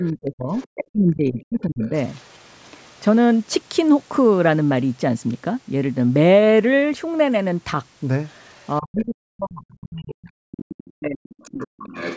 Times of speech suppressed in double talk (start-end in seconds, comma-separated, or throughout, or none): 0.00-1.92, 8.80-11.95